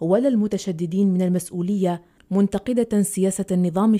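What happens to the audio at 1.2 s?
Nothing goes wrong at 1.2 s; the speech runs through that moment intact, with no dropout, click or distortion.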